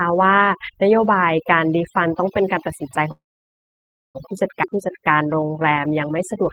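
Overdone noise removal affects the whole speech clip. The noise reduction was set so strong that frequency bands near its noise estimate are pushed down or switched off, and the quieter parts of the voice are removed along with the noise. The background falls to near silence with twinkling specks. On a spectrogram the gaps between words look almost black, scattered with isolated dots, and the speech harmonics have ragged, eaten-away edges.

From 3.11 to 4.17 s comes a call audio freeze. The last sound carries on briefly as a fading buzz, and then about 0.95 s is silent. The cause is likely that packets were held up and the jitter buffer ran dry. When audio returns it picks up exactly where it stopped, so about 1.03 s of gap has been inserted and nothing is lost. The waveform shows a short decaying tail followed by a flat line.

At 4.63 to 4.65 s there is a skip ahead. Roughly half a second of speech has been dropped while later audio was already waiting, and the two sides are spliced together with only about 6 ms of fill. 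It sounds like an abrupt jump with a chunk of the sentence missing. On a spectrogram it shows as a hard vertical seam where the harmonic patterns change discontinuously, and the waveform shows a sudden shape change.

From 4.70 to 6.43 s there is a jitter buffer slow-down. To rebuild its reserve, the receiver repeats single pitch periods and fragments of pauses, adding about 195 ms and running at 89% speed. The speech drags at an unchanged pitch, with drawn-out sounds. On a spectrogram the harmonics stay at the same frequencies but stretch in time, and the waveform shows runs of near-identical repeated cycles.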